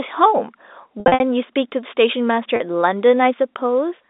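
Packet loss with pitch repetition hits at 1.0 to 1.2 s, where about 160 ms goes missing in runs up to 60 ms, and at 2.56 s. Repeated pitch periods cover each gap, giving a brief buzzy hold.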